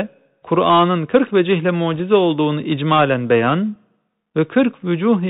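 Throughout the speech, the sound is boxed-in and narrow, with a fine granular hiss beneath it, a scratchy edge on s sounds, and roughness on loud bright moments. This is the Bluetooth CVSD headset codec, which fits a 64 kbps stream. It encodes each sample as a single up-or-down bit with an adapting step size. Nothing above 4 kHz survives, and fast high-level changes outrun the step, so the damage is plainly audible.

From 1.94 to 2.01 s, just before "olduğunu icmalen beyan", a brief rushing crackle passes over the speech with no sharp clicks. These are bit errors on a Bluetooth voice link. Scattered bits in the CVSD stream were flipped at a rate of around one percent. Because each bit only nudges the waveform slightly and the errors fade out, the result is a short smear of noise rather than loud pops.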